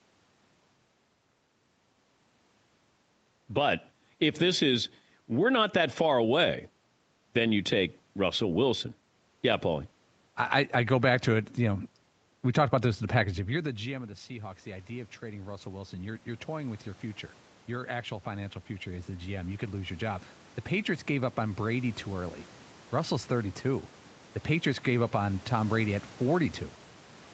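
At 12.83 s, just after "know we talked about", the level at the microphone drops by about 18 dB as the talker moves away. Automatic gain rising follows. The gain control hears a quiet input and lifts its gain by about 7 dB until 16.87 s, before "your future". Voice and room noise swell together. A second rise runs from 17.68 s to 23.59 s, adding about 8 dB more. The background climbs slowly with it.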